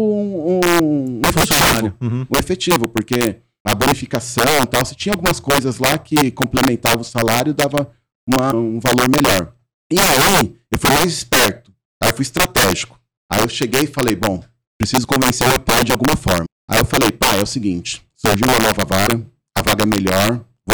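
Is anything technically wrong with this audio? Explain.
Yes, there are two faults. Integer overflow runs through the whole clip: the loudest speech peaks break into harsh, violent cracks, far sharper than ordinary clipping. The signal was pushed about 9 dB past the integer limit, so a small share of samples wrapped around to the opposite extreme instead of being held at full scale.

A broken MP3 bit reservoir is the likely cause of three brief glitches in a stream of 26.1 ms frames. They occur at 8.50–8.53 s, just before "valor melhor"; at 16.45 s, right after "meu pai de alguma"; and at 19.06–19.09 s, after "seguinte surgiu uma nova". At each one the audio jumps ahead with a short disturbance. Frames were cut out, so the frame that followed reached back for borrowed data and decoded bytes from the wrong frame.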